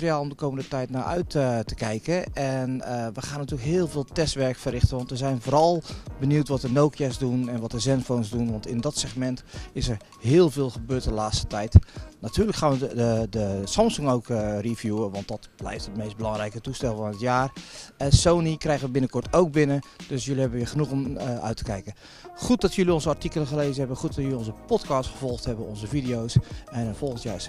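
No technical faults can be heard anywhere in the audio. The sound runs without any break, glitch or disturbance at any point.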